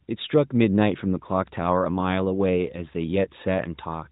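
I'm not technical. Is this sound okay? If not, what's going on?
Yes, there's nothing wrong with this speech recording. It has the narrower, slightly boxed-in sound of an ordinary mobile phone call, because the AMR narrowband mobile codec that carries it keeps nothing above about 3.8 kHz, so the crisp top end of the voice isn't there.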